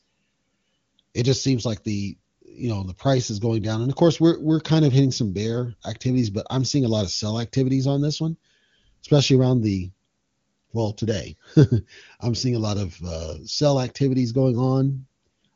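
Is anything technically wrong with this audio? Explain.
No, nothing technically wrong stood out on listening to this speech.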